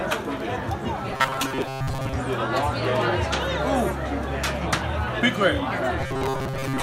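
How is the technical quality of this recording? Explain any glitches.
Two stretches lose their natural character, from 1.12 to 2.13 s and from 5.99 s to the end at 6.83 s. In both, the sound becomes a rigid, metallic buzz fixed near 133 Hz, following the audio only loosely. This is robotic sound from repeated short buffers, likely caused by new audio arriving too slowly, so a segment of about 7.5 ms is replayed over and over in place of most of the real signal.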